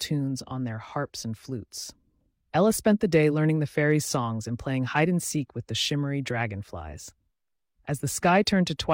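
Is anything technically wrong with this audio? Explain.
No, nothing is technically wrong with this audio.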